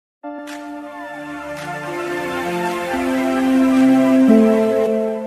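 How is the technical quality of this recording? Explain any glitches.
Two glitches, both compressed frames skipped, at 0.37 s and 4.86 s. Each time the decoder drops around 300 ms of audio, a run of about 15 and then about 10 frames of 23.2 ms, and jumps ahead. Each join is heard as a sudden jump forward in the audio.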